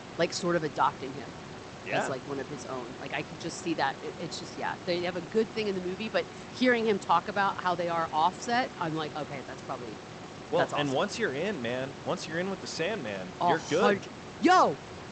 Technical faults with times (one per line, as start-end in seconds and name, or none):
none